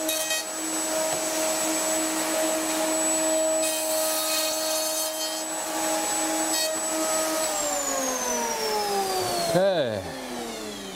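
At 4.51 s the audio jumps forward by roughly 70 ms: compressed frames were skipped, either missing from the stream or rejected by the decoder as damaged. The gap fits about three 20 ms frames lost at once. Unlike a dropout, no silence fills the gap; the material simply resumes slightly further along.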